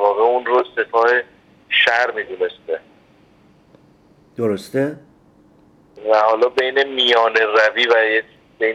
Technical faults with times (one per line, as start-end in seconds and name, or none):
none